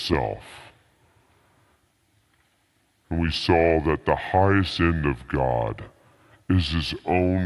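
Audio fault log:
throughout, wrong sample rate: speech drags slow and low, 0.73 speed, 5.55 semitones down, which fits 44.1 kHz audio played back at 32 kHz.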